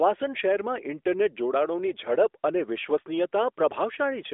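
Speech over an AMR narrowband mobile codec path at 12.2 kbps, with the usual 300 Hz to 3.5 kHz line band and nothing above 3.7 kHz; no technical faults present.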